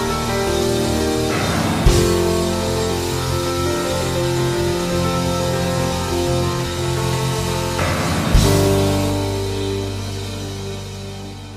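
From 7.03 to 9.10 s, GSM phone buzz: radio bursts at about 217 Hz are rectified into a steady, raspy tone about 13 dB below the signal, showing as evenly spaced harmonic lines on a spectrogram.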